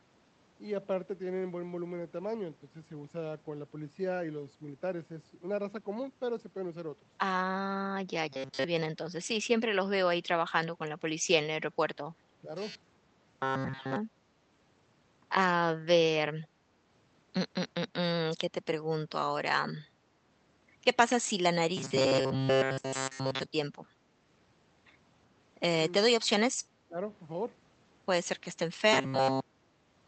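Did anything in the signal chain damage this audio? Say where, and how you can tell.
Yes. Robotic sound from repeated short buffers appears at 8.29–8.64 s, 12.60–13.96 s, 21.77–23.46 s and 28.93–30.07 s, at the buffer or jitter-buffer stage. It is a rigid 133 Hz buzz, which fits repeating a segment of about 7.5 ms. The first two stretches are entirely repeated, and the later two are mostly repeated. This likely comes from audio arriving too seldom, with the playout logic looping the last chunk in place of the missing speech.

Speech suppressed in double talk, from call processing, shows as brief dips at 12.41–12.49 s and 26.88–26.98 s. The first dip is shallow, a few dB. The second is deeper, around 15 dB, lasting about a tenth of a second. The echo canceller likely treated overlapping talk as its own echo and turned the near-end speech down with it.

An echo leak, also from call processing, occurs at 16.43–16.47 s. 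It is a very faint delayed copy of the speech, roughly 40 dB below it, arriving 377 ms late. A loudspeaker echo was likely only partly cancelled, and the residue was sent back down the line.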